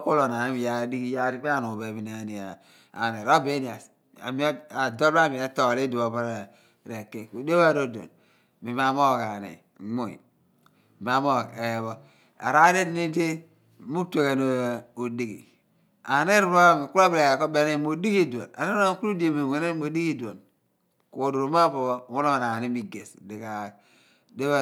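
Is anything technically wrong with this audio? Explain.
No, nothing technically wrong can be heard here.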